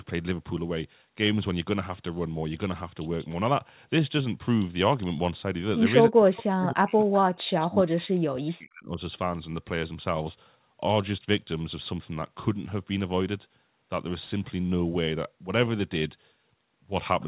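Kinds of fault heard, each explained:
Speech suppressed in double talk: Twice the speech sinks hard, from 6.09 to 7.13 s and again from 7.48 to 9.0 s, dropping by something like 40 dB at its worst and affecting around a second the first time and about one and a half seconds the second. The likely culprit is an echo canceller that heard both ends talking at once, couldn't separate its own talker from the loudspeaker echo, and turned everything down.
Echo leak: Two short scraps of a delayed copy of the speech slip through, at 6.36 to 6.43 s and at 7.03 to 7.16 s, each trailing the original by about 0.29 s and sitting well below it, roughly 20 dB down and then around 25 dB down. That points to the other side having the call on a loudspeaker, with its echo canceller likely leaving part of what its microphone picked up and sending it back.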